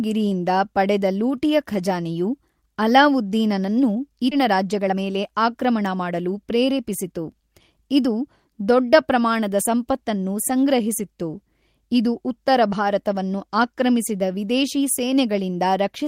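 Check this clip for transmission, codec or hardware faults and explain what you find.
Two faults occur close together in this speech.

At 4.31 s, just after "ಪಡೆದ ಲೂಟಿಯ ಖಜಾನೆಯು ಅಲಾವುದ್ದೀನನನ್ನು", there is a skip ahead: roughly 0.7 s of audio was discarded while later audio was already waiting, and the two sides join directly with no gap. Unlike a dropout, nothing silent or filled marks the loss; the sound simply jumps forward.

From 4.42 s to 6.79 s a jitter buffer speed-up follows as the receiver works off its remaining excess delay by repeatedly cutting short pitch-period pieces, about 0.3 s in total. The speech runs at roughly 111% speed and sounds hurried, but the pitch stays unchanged, which separates it from a sample-rate mismatch.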